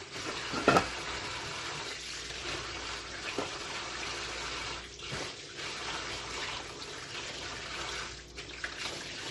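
A filter in the processing chain is restarted on every block throughout the recording, losing its state and starting each block from silence. Each block therefore opens with a small transient, and these add up to a steady 200 Hz buzz whose loudness rises and falls with the sound.

The audio was likely transcoded between lossy codecs, passing through several in turn, with a character that fits an MP3 stage followed by Opus and then HE-AAC. Each stage adds its own smearing on top of the last, and nothing survives above 12.1 kHz.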